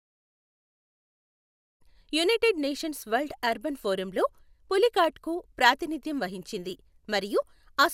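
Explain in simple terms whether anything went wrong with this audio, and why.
Nothing went wrong: the speech comes in on a deliberate, smooth fade-in over the first couple of seconds, reaching full level by about 1.83 s, with no clicks, dropouts or other faults anywhere in the recording.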